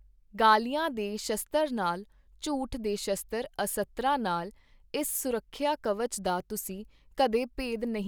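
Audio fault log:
No technical faults can be heard anywhere in the speech recording; the signal holds steady throughout.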